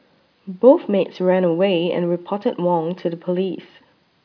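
No technical faults can be heard in the speech recording. There is nothing to mark at any point in the clip.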